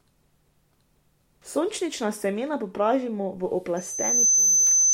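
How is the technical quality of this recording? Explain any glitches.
The recording has one clear glitch. Loudspeaker feedback squeal from 3.76 s to the end: the microphone re-amplifies its own loudspeaker until a 6.1 kHz tone swells over about half a second to roughly 10 dB above the speech.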